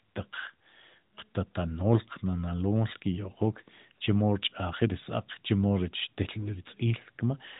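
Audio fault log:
Nothing in this speech recording stood out on listening.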